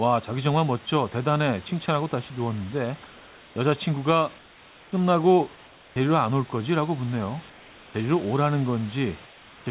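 In the pauses at 3.06–3.56, 4.38–4.92, 5.56–5.96, 7.50–7.94 and 9.26–9.66 s, comfort noise replaces the background. It is a steady, featureless hiss about 2 to 3 dB quieter, likely from discontinuous transmission. On a spectrogram it shows as smooth, uniform texture, and on the waveform as an even, slightly lower band.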